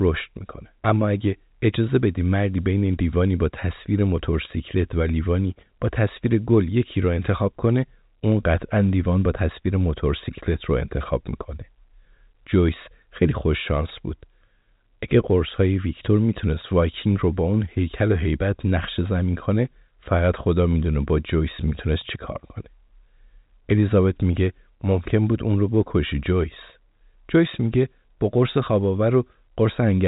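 No faults detected: the speech runs over an ordinary G.711 A-law telephone path, band-limited to about 3.8 kHz, with nothing beyond that format's normal character.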